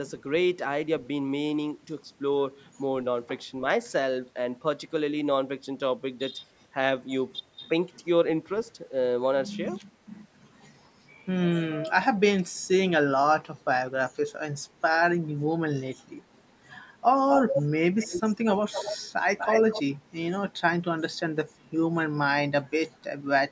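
An echo canceller on a loudspeaker end likely let part of its microphone pickup through, causing echo leak: a copy of the speech trails by 243 ms. It is about as loud as the speech at 17.3–17.63 s, then fainter at 17.99–18.22, 18.72–18.98 and 19.38–19.83 s.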